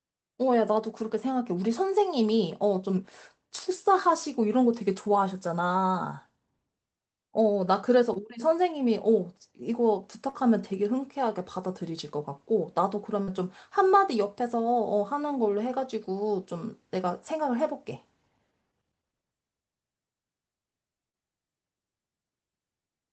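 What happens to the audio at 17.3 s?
Nothing goes wrong at 17.3 s: the speech plays through that moment intact, with no dropout, click or distortion to be heard.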